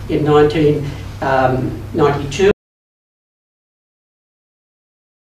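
At 2.51 s the sound cuts off abruptly and never returns. This is an audio dropout to silence. It lasts about 2.7 s, running to the very end. The gap is silent, with no room tone or noise floor underneath. The input signal was likely lost, through a disconnected device, a failed link or an accidental mute, while recording continued and wrote silence. Whatever followed the cut is missing.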